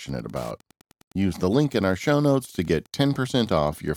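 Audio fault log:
throughout Wi-Fi interference: a faint, steady ticking sits under the speech about ten times a second, roughly 35 dB below it. A nearby Wi-Fi radio's beacon, repeating every 102.4 ms, is picked up and rectified by the audio circuit, so each burst becomes a click.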